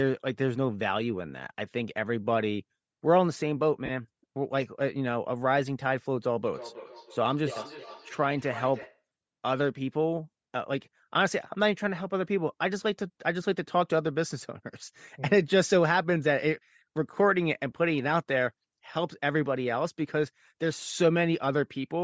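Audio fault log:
Throughout: Bluetooth LC3 compression. The speech has a plainly audible breathy, grainy edge, likely from LC3 coding at a rate that fits 32 kbps with 10 ms frames. Upper bands are zeroed and noise-filled, so a spectrogram shows smeared, speckled high-frequency texture instead of clean harmonics.
3.86 to 3.90 s and 8.82 s: lost LE Audio frames. About 30 ms, then 10 ms, were filled by repeating the previous spectrum with randomised signs, giving a brief noisy smear. The waveform shows a short patch of hashy, unstructured signal, and the spectrogram a vertical stripe of flat, blurred energy.
6.53 to 9.04 s: feedback echo between two devices. The speech returns at a fixed interval of about a third of a second, peaking about 15 dB below the direct sound and growing thinner and more ringing with each pass. Each device's canceller ignores sound played by the other device, so the loop persists. 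A spectrogram shows faint, evenly spaced copies of each syllable.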